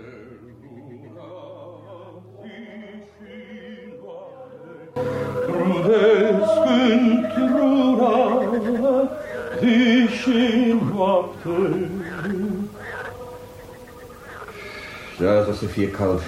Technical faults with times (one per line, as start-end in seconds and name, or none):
0.00-4.96 one channel inverted